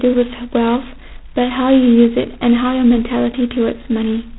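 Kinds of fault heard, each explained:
G.726 ADPCM: The speech is coded as a coarse difference from an adaptive prediction of each sample, so the quantisation error forms a harsh, rasping hiss that rises and falls with the speech level throughout the clip. The heavy grit fits the 16 kbit/s rate, with two bits per sample. Nothing passes above 3.9 kHz. A plain band-limit would sound clean, and G.711 adds only a faint, smooth hiss.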